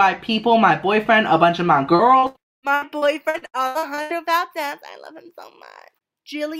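The audio carries a cluster of network-loss faults between about 2 and 4 s. Two instances of short concealed packet loss, at 1.95 s and 2.19 s, each drop about 40 ms that the decoder bridges by extending the preceding sound, leaving brief smears. A burst of packet loss follows at 2.27 to 2.38 s, where about 80 ms goes missing and the patched stretch decays into a held, fading tail before playback jumps ahead. From 2.39 to 2.66 s the sound briefly continues, then collapses into near-silence for roughly a quarter of a second before returning with material lost, most likely a long network dropout. Repeated packet loss (robotic sound) then runs from 2.75 to 4.13 s: eleven gaps, the longest 82 ms, leave about 36% of that span synthesized, giving a choppy texture with fragments missing.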